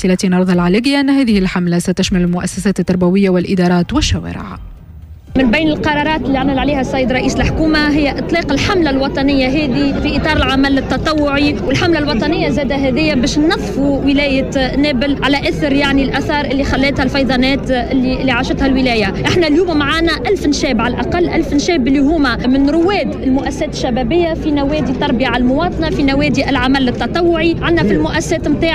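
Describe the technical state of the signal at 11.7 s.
A single low thump, close to a click, lands at 11.68 s while the sound carries on unchanged underneath. It is a DC step: the waveform's zero line suddenly jumps by an offset of about -20 dBFS, as happens when a converter recalibrates or an offset input is switched in. That abrupt shift is heard as the thump. Rather than holding, the offset then drains away, behaving like a 5 Hz high-pass that pulls the baseline back to zero.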